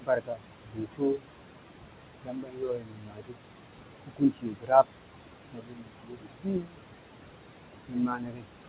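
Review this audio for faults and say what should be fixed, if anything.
Noise suppressor artifacts throughout: the suppressor pulls the room noise down by about 21 dB between phrases, leaving it to swell under the speech.

Speech cut by the noise suppressor at 0.0–0.44, 0.64–1.23, 2.22–3.39, 4.06–4.87, 5.53–6.8 and 7.86–8.47 s: parts of the speech, up to about a second at a time, dip by as much as about 22 dB.

To prevent both, lower the suppressor's aggressiveness or reduce the room noise, which sits only about 9 dB below the speech, so less suppression is needed.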